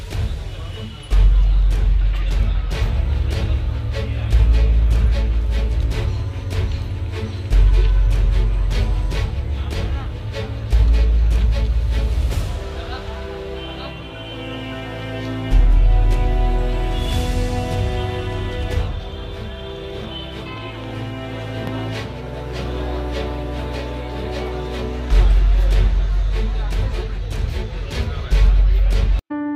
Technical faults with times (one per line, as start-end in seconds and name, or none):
none